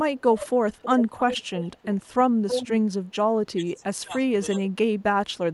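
From 0.72 to 2.09 s, and again from 2.47 to 2.68 s, an echo leak brings back a copy of the speech about 322 ms behind the original. It sits roughly 10 dB below the speech in the first stretch and only about 5 dB below in the second. The likely cause is a far-end loudspeaker whose echo canceller let its microphone pickup through. On a spectrogram the harmonic pattern repeats, shifted right by about a third of a second. In the waveform, weaker envelopes trail each burst.

Speech suppressed in double talk follows, likely from the echo canceller mistaking overlapping talk for echo and turning everything down. The level dips by about 10 dB for a few tens of milliseconds between 2.98 and 3.15 s. It then drops by about 25 dB for roughly half a second between 3.56 and 4.12 s. A shallow dip of about 5 dB follows, lasting around a tenth of a second between 4.5 and 4.6 s. On a waveform these show up as notches in the envelope. 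A spectrogram shows them as darkened vertical bands.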